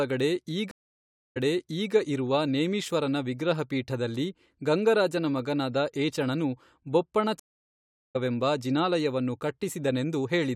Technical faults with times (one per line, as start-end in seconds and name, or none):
0.71-1.93 stream reconnect
7.39-8.16 stream reconnect